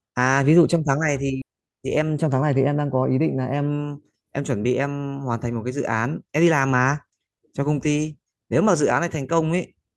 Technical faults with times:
1.41-1.43 skip ahead
1.51-3.19 jitter buffer speed-up

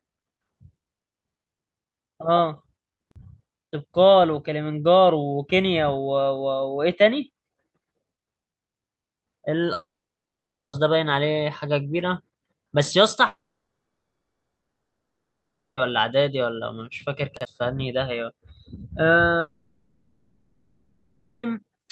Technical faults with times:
3.07-3.16 chunks out of order
9.73-10.75 long network dropout
13.27-15.79 long network dropout
17.37-17.45 chunks out of order
19.39-21.45 long network dropout

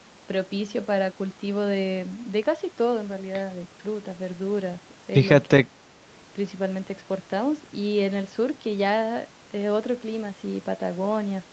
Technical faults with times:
5.47-5.74 speech suppressed in double talk

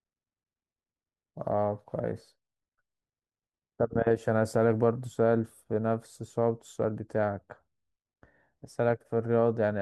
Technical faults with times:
none

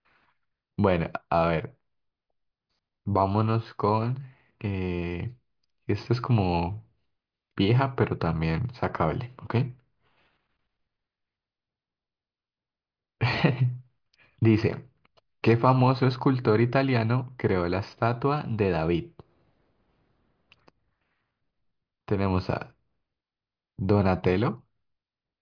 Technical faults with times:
none

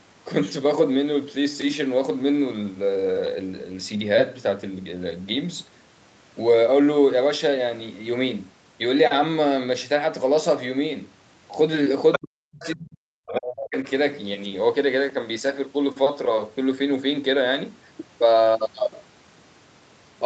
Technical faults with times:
12.12-12.19 other side's voice leaking through
12.18-13.77 speech suppressed in double talk
12.61-12.71 other side's voice leaking through

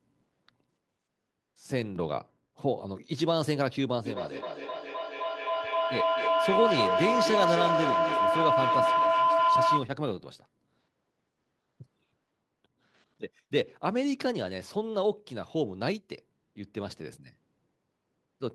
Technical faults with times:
4.05-9.97 feedback howl

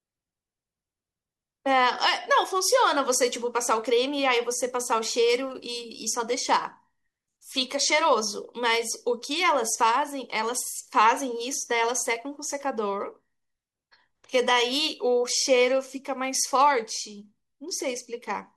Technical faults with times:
none

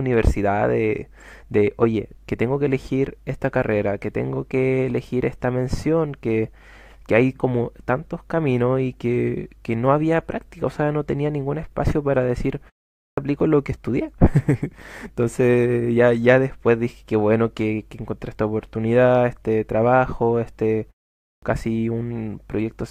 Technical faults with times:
12.94-13.17 clipped start after a pause
21.20-21.42 clipped start after a pause

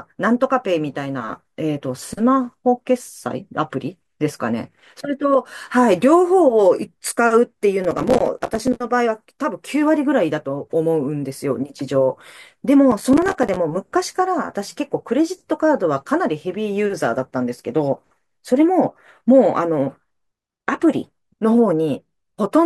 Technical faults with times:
7.84-8.76 processor overload crackle
12.92-13.56 processor overload crackle

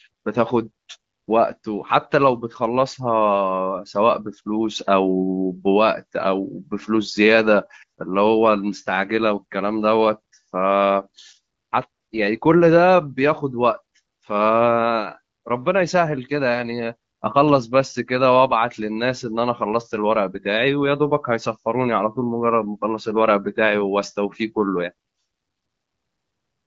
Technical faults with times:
none

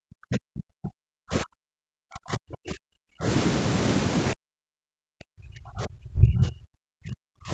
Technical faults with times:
0.00-3.26 speech suppressed in double talk
4.33-7.52 speech suppressed in double talk

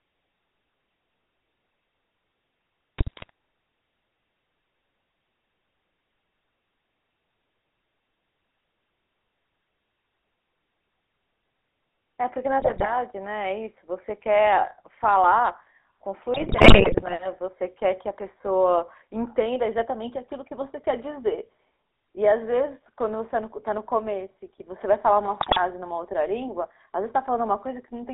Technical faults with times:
0.00-28.13 GSM full-rate codec
2.98-3.30 GSM bit errors
12.60-12.87 GSM bit errors
16.34-17.16 GSM bit errors
25.40-25.60 GSM bit errors

